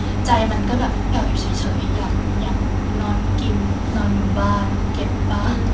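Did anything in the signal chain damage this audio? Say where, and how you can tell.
No, nothing in the chain has hurt this speech: it came over a call path, and the top end stopping at 8 kHz fits a wideband codec like G.722 at 64 kbps, which is just what that route would give you.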